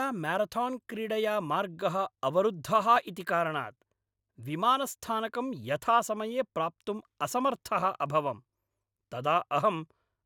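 At about 2.96 s there's an overlap between stream segments: a few milliseconds of speech get trimmed at a segment join, fitting 6-second segments, so you hear a tiny skip.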